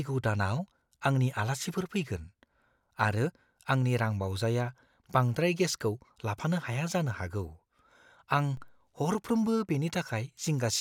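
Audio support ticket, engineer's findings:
Low thump at 8.57 s, speech unaffected. DC step of about -40 dBFS in the zero line, decaying through a 2 Hz high-pass, consistent with an offset switched in upstream.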